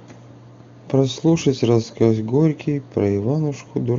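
The speech carries no audible technical faults.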